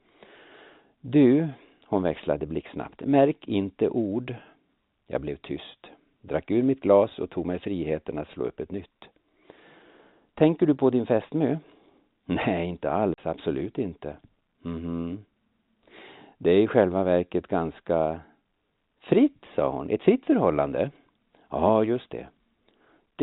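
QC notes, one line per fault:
13.14 to 13.18 s, packet loss filled with silence: a 40 ms hole with hard edges, which fits two lost 20 ms packets replaced by silence.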